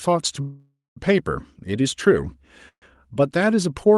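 At 0.41 to 0.98 s and 2.68 to 2.84 s, the speech stalls in a call audio freeze. Each stall starts as a fading buzz or hiss, then goes briefly silent. The speech resumes intact, only later, likely because delayed packets emptied the jitter buffer.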